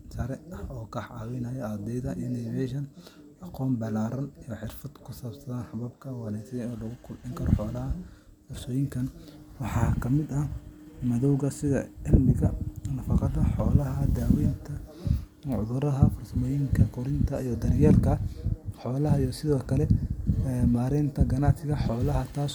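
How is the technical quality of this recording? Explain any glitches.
No glitches or technical faults can be heard anywhere here.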